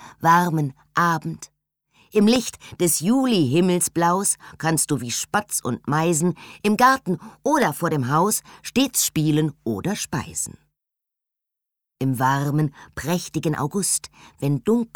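The audio is interrupted by two loud pops, one from 2.36 to 2.38 s and one from 7.62 to 7.65 s. Each is a single sharp burst, roughly 15 dB above the surrounding sound. The sound carries on underneath both of them. The likely cause is a sudden voltage spike entering the signal path, such as a switch, a plug or a static discharge. The circuits after it briefly shape that spike into an audible pop.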